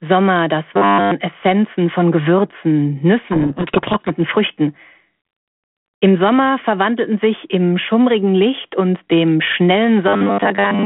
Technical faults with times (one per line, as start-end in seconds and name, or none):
0.74-1.11 robotic sound from repeated short buffers
3.18-4.10 codec payload misread
10.08-10.85 robotic sound from repeated short buffers